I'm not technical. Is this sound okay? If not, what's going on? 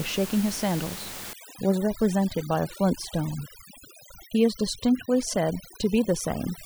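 No. From 1.33 s to the end there is overdone noise removal: a cleanup tool set too strong makes the background drop and break up into twinkling specks.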